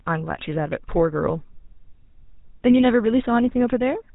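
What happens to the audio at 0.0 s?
GSM full-rate codec damage is present from 0.0 s and throughout: pulse-driven vocal-tract modelling, consistent with roughly 13 kbps, cuts everything above 4 kHz and leaves the speech plainly buzzy and gravelly.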